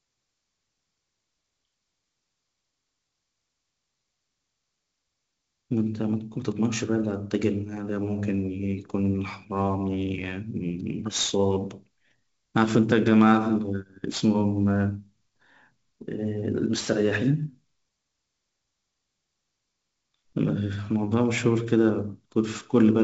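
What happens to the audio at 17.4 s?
At 17.4 s you're hearing sample clock jitter, which runs through the whole clip rather than starting there. The converter's clock wobbles by something like 7 microseconds, so each sample lands a little early or late. Steep, fast-moving parts of the waveform turn that timing slop into error, which here sits roughly 25 dB under the speech. It comes across as a grainy hiss that swells on loud, bright syllables and drops away in pauses.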